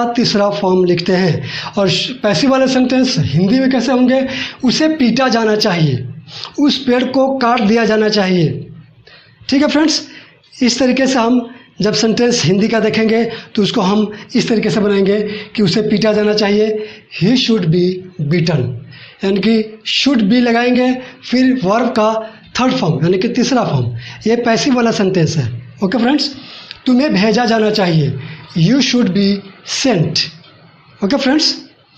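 No technical faults can be heard anywhere in the audio, and the signal holds steady and continuous throughout.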